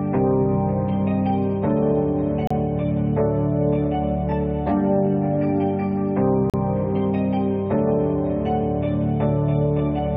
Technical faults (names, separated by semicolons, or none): gap between stream segments